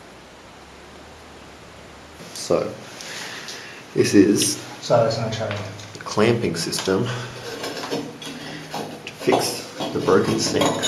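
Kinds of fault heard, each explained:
Nothing stood out as a fault on listening.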